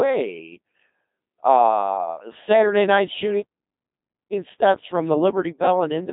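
The speech passed through the Codec 2 vocoder for its whole length, which fits a 2.4 kbit/s mode. Only pitch, voicing, energy and spectral shape survive, resynthesised from sine waves. Voicing turns heavily robotic and buzzy, confined to about 200 Hz to 3.7 kHz, with nothing above 3.8 kHz.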